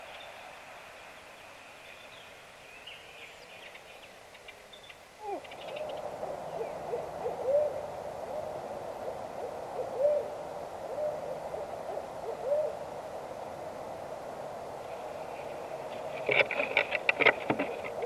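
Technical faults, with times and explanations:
No technical faults can be heard anywhere in the signal.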